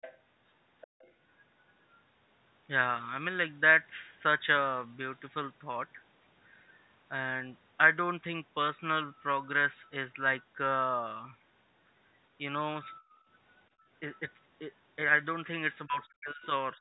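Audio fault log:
0.01–0.19 s and 0.81–1.12 s, other side's voice leaking through: a faint second voice sits under the clip, roughly 20 dB below the main talker at first, then about 25 dB below. The likely cause is loudspeaker playback that the echo canceller did not fully remove from the microphone.
0.87–0.99 s, 13.0–13.28 s and 13.7–13.87 s, background gated by the echo canceller: the room sound abruptly sinks and then returns. It drops about 36 dB in the first dip and about 21 dB and 19 dB in the later two, because the canceller clamped the microphone while the loudspeaker was playing.
15.86–16.5 s and 16.73 s to the end, speech suppressed in double talk: the talker's voice is pushed down by roughly 35 dB over about half a second, then by around 15 dB in a short final dip. The likely cause is both sides talking at once, so the canceller treated the talker as echo.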